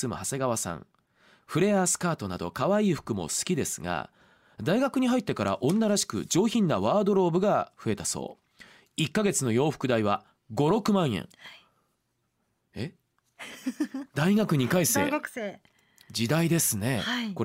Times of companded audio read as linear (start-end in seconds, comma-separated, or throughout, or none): none